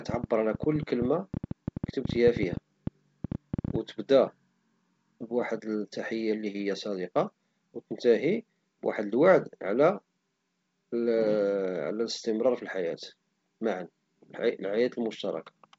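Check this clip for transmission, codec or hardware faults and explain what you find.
One fault stands out: a train of clicks from 0.09 s to 3.76 s. A nearby piece of equipment or a struggling interface is likely injecting short, similar pulses into the signal, here at about 9.6 per second on an irregular rhythm, around forty in all. Peaking roughly 10 dB above the speech, they are heard as an uneven ticking laid over the talking and the gaps between phrases. The G.722 coding shows its wideband character, with nothing above 7.8 kHz and light coding noise at 56 kbit/s.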